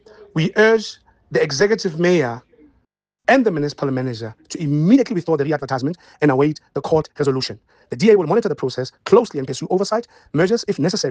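At 4.91 s the pace jumps abruptly and stays fast to the end, running about 1.51 times quicker while the pitch holds steady. It sounds rushed. This is a time-stretched section, likely squeezed by software to fit a shorter length. What sets it apart from a sample-rate or playback-speed error is the unchanged pitch: simply playing faster would raise it.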